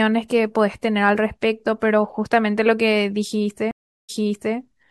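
At 3.71 s a stream reconnect leaves a flat, blank 375 ms gap in the waveform, then a restarted decoder fades in 0.47 s earlier, repeating speech.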